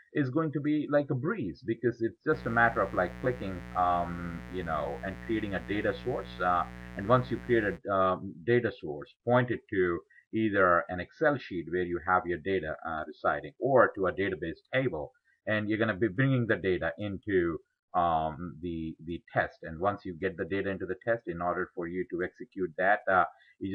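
Mains buzz from switching spikes on a 60 Hz supply, likely poor shielding or a dimmer, adds a raspy, fairly loud buzz to the audio from 2.30 to 7.79 s.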